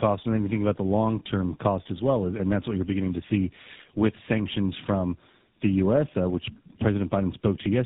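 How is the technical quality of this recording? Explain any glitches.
The quality is poor throughout, with speech rough, muffled and warbly, and nothing above 3.8 kHz. This is tandem speech coding: two speech codecs in a row, ending in GSM full rate, each re-encoding the previous one's degraded output.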